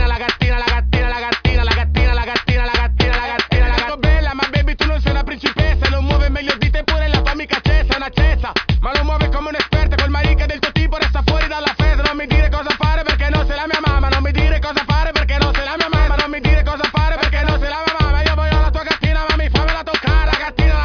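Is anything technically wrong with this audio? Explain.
No, nothing technically wrong stands out here; it all sounds just as it should from beginning to end.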